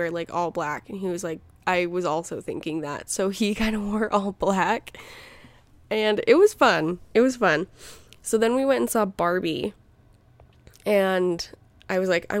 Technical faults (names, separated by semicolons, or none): none